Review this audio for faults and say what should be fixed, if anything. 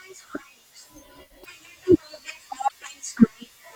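Frames appear to have been dropped from the MP3 stream, which is likely a broken MP3 bit reservoir: the frame after each gap reaches back into earlier frames for its data and decodes bytes from the wrong place. In this speech clip the sound jumps and is disrupted briefly, from 1.43 to 1.46 s and from 2.68 to 2.72 s, each spanning one to two frames of about 24 ms. To prevent it, carry the stream over a path that delivers complete, contiguous frames, and when data is lost, resynchronise at a frame that does not borrow from missing predecessors.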